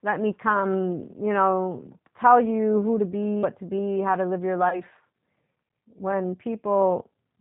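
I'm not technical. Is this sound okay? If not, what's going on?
No. The whole recording went through the G.729 codec, a phone-call compressor that squeezes speech hard, so it sounds muffled, slightly rough and robotic throughout.

At 3.43 s, right after "you who to be", there is likely audio missing between chunks: about a tenth of a second vanished where recording pieces join, causing a jump before "to be how to".

From 4.69 to 4.82 s, just after "how to live your", there is VoIP packet loss concealed by the speech codec. About 30 ms of data was lost, and the decoder guessed to fill it, leaving a stretched sound that fades.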